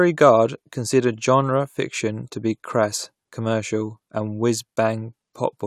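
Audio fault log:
No audible faults detected.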